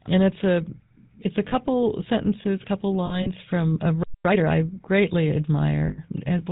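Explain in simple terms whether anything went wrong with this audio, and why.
Yes, several things went wrong. The whole clip went through the GSM full-rate codec, an old phone-network speech coder. It rebuilds speech from a simple model and drops everything above 4 kHz. So the speech sounds buzzy, gravelly and muffled from start to finish.

There are lost GSM frames in three places. The phone filled each gap by repeating the last good piece of sound. That gives a brief rough, metallic ring. The first is at 1.48 to 1.53 s, between "it's a it's a" and "sentences couple". The second is scattered from 3.06 to 3.30 s, before "from a". The third, the longest at 100 ms, is at 5.88 to 5.99 s.

At 4.03 s, right after "from a", there is a playback stall. The sound simply stops for about 0.22 s. The likely cause is that the player ran out of audio data. It resumes at 4.25 s with "I greatly".

Then comes a time-compressed catch-up, from 4.25 to 4.45 s. 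The player trimmed its backlog by snipping out tiny pieces. That section plays at double speed. It sounds rushed, but the pitch does not change.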